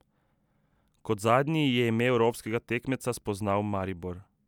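No technical faults are audible.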